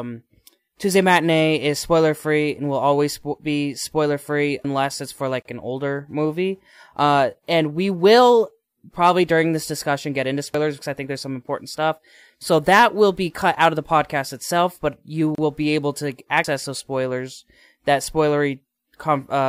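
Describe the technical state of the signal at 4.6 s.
At 4.64 s there's a skip: roughly a tenth of a second of the speech drops out and the two sides butt straight together with no gap. That's audio missing between chunks, likely lost while the recorder closed one 6-second chunk and opened the next.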